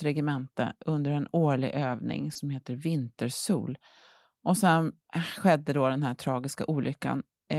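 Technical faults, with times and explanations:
2.33–2.47 s, short concealed packet loss: about 20 ms of the speech arrived too late for the decoder, so the receiver covered the gap with 20 ms of its own fill, extending the preceding sound from its pitch where voiced or as shaped noise where not, then cross-fading back into real audio. The patch also stretches timing by roughly 15 ms, which is why this spot sounds like a brief smear or wobble in the speech.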